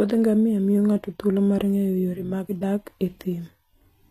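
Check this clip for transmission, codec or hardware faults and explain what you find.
One codec fault runs through the whole clip: plainly audible HE-AAC compression damage.

From start to end, the treble stops at about 14.9 kHz and the upper band sounds rebuilt rather than captured. The likely cause is HE-AAC at a low rate, fitting roughly 24 kbps. This codec transmits only the lower spectrum and synthesises the top by spectral band replication, copying lower bands upward under a coarse envelope. Harmonics therefore fail to line up across the crossover, so sibilants take on a gritty, metallic or lispy quality.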